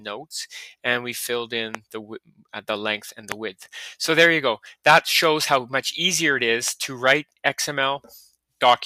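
Three loud pops cut through this audio, at 1.75 to 1.77 s, 3.32 to 3.34 s and 6.68 to 6.70 s. Each is a single sharp hit, roughly 15 dB above the surrounding material, with the sound carrying on underneath. That short, isolated spike is what you get when a sudden voltage step lands on the signal, likely a glitch from a plug, switch, static discharge or the driver, and gets shaped by the circuitry downstream. Separately, between 2.25 and 2.5 s there's sound cut by the noise suppressor. It misjudged part of the signal as noise and pulled it down hard, by about 18 dB at the deepest point, across something like 150 ms of that stretch. You hear it as a brief sag or hollowing, where the steadier, sustained parts drop away while anything sharper still gets through.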